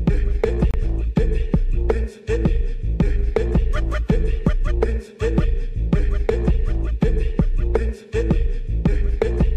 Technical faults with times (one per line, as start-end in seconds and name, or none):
0.71-0.74 Bluetooth dropout